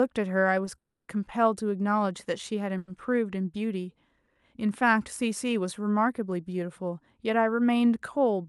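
At 0.78 s the speech halts in a call audio freeze lasting about 0.3 s, to 1.10 s. A brief fading continuation of the last sound gives way to roughly 200 ms of silence, then speech resumes exactly where it stopped, now running 300 ms later. A shorter freeze follows at 2.78 to 2.90 s, filled entirely by the fading continuation, delaying everything after by 100 ms. The likely cause is packets arriving late and the jitter buffer running dry.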